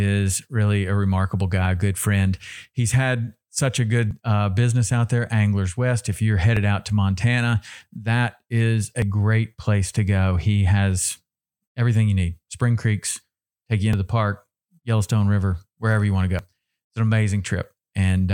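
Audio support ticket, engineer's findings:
Audio missing between chunks, likely the capture or processing stage dropping roughly 40 ms at each chunk handover, with the two ends spliced directly together. Skips at 4.11 s (after "had such a"), 6.57 s, 9.02 s, 13.93 s (before "the park") and 16.39 s, falling on chunk boundaries about 2.5 s apart.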